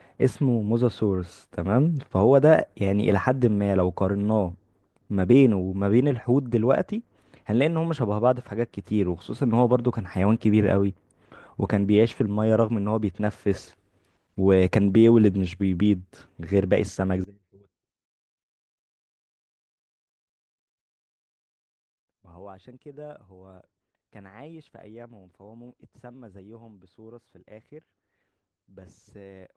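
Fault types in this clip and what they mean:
One channel inverted: From about 17.24 s right to the end, the speech suddenly falls by about 23 dB, as if the middle of the sound has been scooped out. That's the signature of one side of the stereo pair likely having its polarity flipped, so that summing to mono cancels everything the two channels share. The centred voice mostly vanishes, leaving just the faint leftover difference between left and right.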